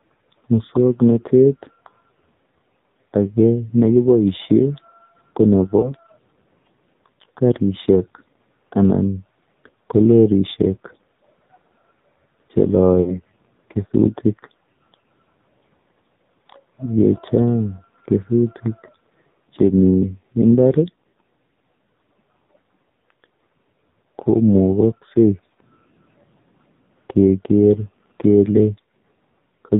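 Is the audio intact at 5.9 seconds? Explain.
No. Around 5.80 to 5.95 s there are lost AMR speech frames: a radio error corrupted the data, so the decoder filled the gap by repeating its last pitch and vocal tract settings at falling gain. The result is a brief dip or warble, which fits a single lost 20 ms frame, and the sound comes back rough for a moment.

This sits within the AMR narrowband mobile codec's heavy damage: 8 kHz sampling removes everything above 4 kHz, and the buzzy, synthetic texture points to a low rate near 5.9 kbps.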